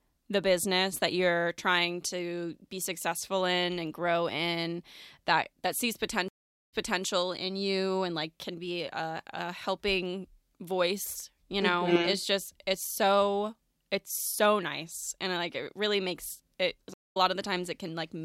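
The connection to the source dropped twice, and each time the player went quiet, reconnected and restarted its decoder partway through the speech stream. These are stream reconnects. At 6.28 to 7.04 s, after "in that that sees", there is about 0.41 s of silence, then the audio picks up 0.34 s earlier, so a short stretch repeats before "in you and like". At 16.94 to 17.17 s, after "it really makes it", a 0.19 s gap is followed by a jump forward of roughly a tenth of a second, skipping some audio.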